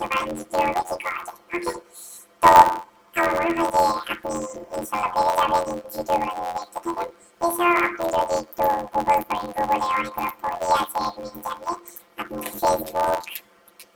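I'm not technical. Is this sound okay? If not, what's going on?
No. The audio has a fault called planar audio read as interleaved. The system stored each small chunk as all the left-channel samples followed by all the right-channel samples, but playback treated them as alternating left-right pairs. The chunks are very short, about 11.6 ms each, which fits a 512-sample buffer. So from start to finish the sound has a robotic buzz at roughly 86 times per second, with no clear jump in pitch.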